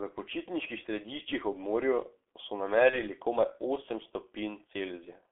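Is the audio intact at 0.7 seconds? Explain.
No. At 0.7 s, as throughout the clip, the speech sounds muffled and hoarse, with smeared consonants and nothing above 3.4 kHz or below 250 Hz. This is heavy G.723.1 codec damage: coarse 30 ms frames, consistent with roughly 6.3 kbit/s, model the voice too slowly.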